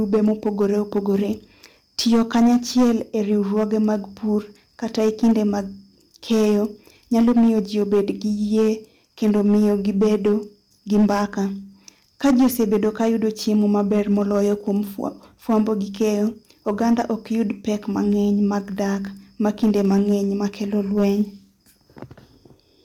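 Harsh crackle and fuzz sit on the louder syllables throughout this speech recording: hard clipping, with about 9 dB of overdrive flattening a small share of peaks.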